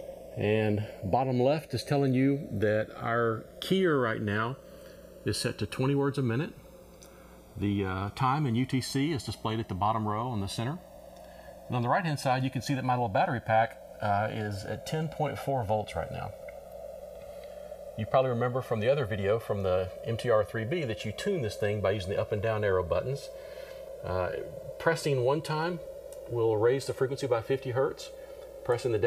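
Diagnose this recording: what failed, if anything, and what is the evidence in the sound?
Channels drifting apart, at the converter stage: the two sides came from devices on separate clocks, roughly 70 ppm apart, so their offset creeps to about 2 ms by the end. Summed to mono, that sliding delay sweeps comb notches through the spectrum, hence the slow flanging throughout.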